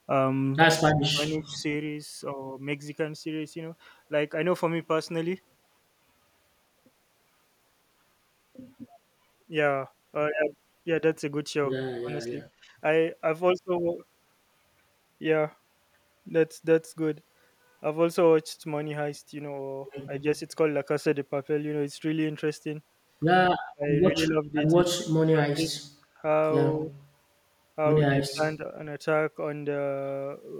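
A speech recording where the far end's echo canceller appears to struggle. Its canceller likely let a little loudspeaker pickup through, an echo leak: from 0.90 to 0.94 s a faint copy of the sound, roughly 30 dB below the speech, arrives about 220 ms late. The same canceller, likely unable to tell its own talker from the returning echo while both sides spoke, pulled the speech down as well. This speech suppressed in double talk produces dips of up to roughly 25 to 30 dB, with short chunks fading out, at 0.98–1.65 s, 11.98–12.36 s, 23.71–24.56 s, 24.95–25.81 s and 28.13–28.62 s, plus a slight momentary dip at 26.86–26.91 s. At 12.64–12.75 s the background gated by the echo canceller shows up as the room sound dropping by about 8 dB for roughly a tenth of a second while it clamped the microphone, then returning.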